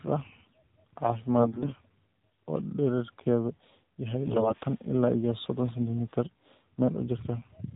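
Throughout, the speech sounds muffled, buzzy and synthetic, with nothing above 4 kHz. That is the AMR narrowband mobile codec: 8 kHz sampling and a pulse-driven vocal-tract model, with damage plain enough to suggest a low mode around 7.4 kbps.

From 1.38 to 1.74 s, and again from 4.24 to 4.65 s, the speech keeps its pitch and loudness but turns hoarse, scratchy and gargly. These are AMR bit errors: roughly a tenth of the bits in the less protected part of each frame arrived flipped, misplacing the excitation pulses and skewing the gain and spectral values.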